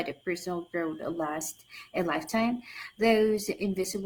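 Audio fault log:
0.92–4.05 s, adaptive stream at a lower bitrate: at 0.92 s the speech drops abruptly to a leaner encoding with no gap, and it stays that way to the end. The change is consistent with an Opus stream falling from about 64 kbit/s to about 16 kbit/s after the connection slowed. Codec artefacts rise over that stretch. The waveform runs on unbroken.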